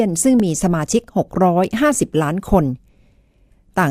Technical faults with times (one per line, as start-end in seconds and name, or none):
0.40 block of digital silence